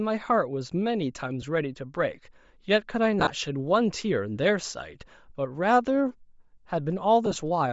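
Speech with a breathy, grainy edge throughout, its upper band replaced by noise rather than simply muffled, is likely Bluetooth LC3 compression at a low bitrate near 32 kbps. Lost LE Audio frames come at 1.42 s, 3.20 to 3.30 s and 7.26 to 7.36 s, heard as brief noisy smears rather than clicks or silent gaps. The 1.42 s smear fits a single 10 ms frame, and the later two are clusters of short gaps.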